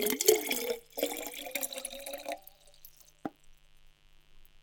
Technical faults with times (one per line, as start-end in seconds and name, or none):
0.00-4.62 mains buzz